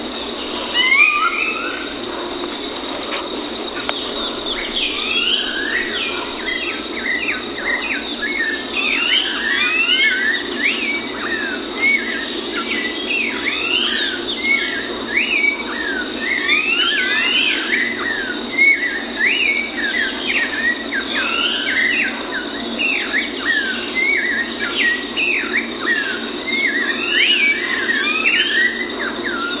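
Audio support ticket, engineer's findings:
No fault found in this clip; nothing to action.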